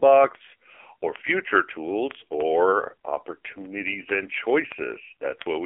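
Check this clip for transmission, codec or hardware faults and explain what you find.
Two faults are present: mobile-codec damage across the whole clip, and a steady stream of clicks.

AMR narrowband mobile codec: Throughout, the speech sounds buzzy, thin and synthetic, with nothing above 3.5 kHz. A heavily squeezed vocal-tract model, fitting a low 5.9 kbps AMR-NB mode, causes this.

Word clock ticks: From 0.13 s to 5.64 s, sharp ticks of uneven strength repeat about every 40 ms. An unlocked receiving clock, off by roughly 700 ppm, drops or repeats a sample each time.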